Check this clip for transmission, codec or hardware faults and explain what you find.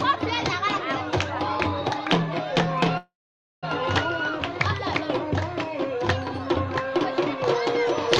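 Two faults are present: a stall in the stream and an uncorrected treble boost at the very end.

Call audio freeze, 2.97 to 3.65 s. The receiver likely ran out of buffered packets because delivery stalled, so it stretched the last sound into a brief fading tail, then held about 0.53 s of silence. When the stream resumed, playback picked up exactly where it stopped. About 0.65 s of gap was inserted and nothing was lost, leaving everything after it that much later.

Pre-emphasis left on, 7.46 s to the end. The treble lift applied before storage or transmission was never undone by the matching de-emphasis. The curve fits the CD 50/15 µs characteristic, and the top end sits about 8 dB above its proper level at 10 kHz relative to 1 kHz. This final stretch sounds thin, bright and edgy, with sibilant, hissy high frequencies pushed forward.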